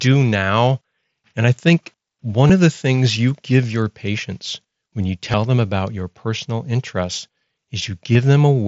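Speech over a Bluetooth headset link shows concealed Bluetooth headset packet loss at 2.47–2.50 s, 5.32 s and 8.13–8.15 s. Dropped packets left gaps of 22.5, 15 and 22.5 ms, each filled with a repeated stretch of recent waveform.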